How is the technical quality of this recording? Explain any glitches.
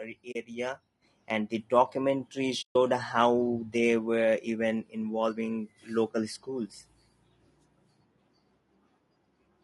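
The recording has audible technical problems throughout. Codec damage is plain, and there are two dropouts and one sudden level jump.

Low-delay AAC compression runs through the whole speech clip. The voice sounds rough and grainy. There is noise between the harmonics, and the top band sounds thin and synthetic. This is likely AAC-ELD, the low-delay codec used for calls. Its short frames resolve pitch harmonics poorly, and at a bitrate around 32 kbps the encoder cannot spend enough bits to hide the damage.

AAC frame loss with muting happens twice. The first hole runs from 0.31 to 0.36 s. It fits two lost frames. The second is longer, from 2.61 to 2.76 s, between "the documentary" and "how they were even". It fits about seven lost frames. The decoder zeroed the missing spectrum. Overlapping windows fade the sound out and back in, so each gap is a soft-edged silence.

The microphone volume is stepped up at 1.02 s. 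The level jumps by about 7 dB in one step. Voice and background rise together. The call software judged the input too quiet and raised the device's input volume at once rather than gradually. The result is an abrupt loudness change.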